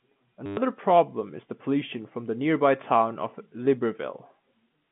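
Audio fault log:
0.46–0.57 s, packet loss with last packet repeated: about 110 ms of audio went missing, and the receiver replayed its last good packet until new ones arrived. The loops restart out of step with the pitch, so the run becomes a brief robotic buzz near 100 Hz, which fits 10 ms packets.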